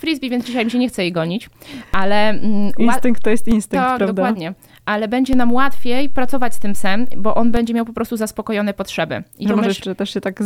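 Two DC steps show up in this sound. The zero line of the waveform jumps by about −10 dBFS at 1.94 s and drops back at 3.52 s, then does the same again from 5.33 s to 7.57 s. Each jump and each return lands as a low thump while the material itself carries on untouched. It's the kind of shift you get when a converter recalibrates or an input carrying an offset gets switched in and then back out.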